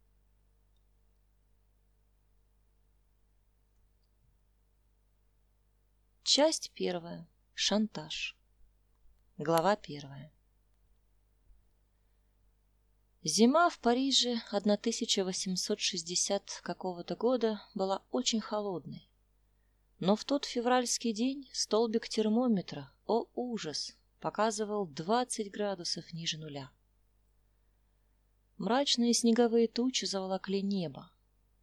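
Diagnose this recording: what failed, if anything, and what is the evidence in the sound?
A single sharp click sounds at 26.15 s. It is a thin vertical line across the whole spectrum with no gap in the sound around it. The fault is likely dropped samples at the driver or buffer stage. A fraction of a millisecond of audio went missing, so the waveform jumps straight from one value to a later one. That step is too brief to remove anything audible. It registers only as the click.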